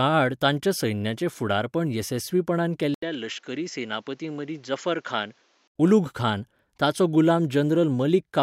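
At 2.94 s, right after "ताच्या सैन्याचें फुडारपण येसस्वीपणान", the speech cuts out for about 80 ms and returns duller, boxier and a few decibels quieter. Nothing remains above 7.6 kHz, and a faint new background noise sits roughly 35 dB below the speech. At 5.76 s, just before "उलुघखान ताचो", the full brightness returns. This is likely an input switched to a poorer device, a narrower-band microphone with its own tone, level and noise floor.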